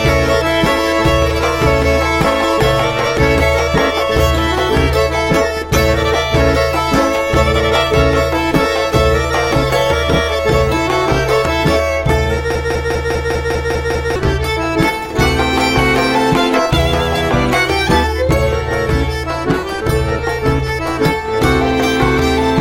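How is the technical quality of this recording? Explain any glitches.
The recording has one clear glitch, a broken-record loop. From 12.55 to 14.16 seconds, a fragment of about 200 ms repeats exactly, back to back, eight times over. It sounds like a stuck skip, a rapid stutter with a steady rhythm. The likely cause is a player or stream stalling and resending the last chunk it held. Whatever audio belonged in that stretch is gone, replaced by the repeats.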